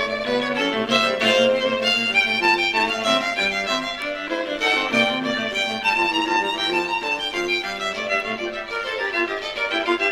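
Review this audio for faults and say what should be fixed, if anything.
Overlap-add ripple runs through the whole clip. The sound was split into windowed frames and rejoined with an overlap whose windows do not sum to a constant gain, so the level dips and recovers once per frame. The result is a metallic buzz at about 100 Hz, with extra tones around each note and the level swinging by about 6 dB. On a waveform the envelope shows a regular scalloped modulation at that rate; a spectrogram shows sidebands or vertical striping spaced at the frame rate. To prevent it, pair the analysis and synthesis windows with a hop size that satisfies the constant-overlap-add condition, or normalise by the summed window.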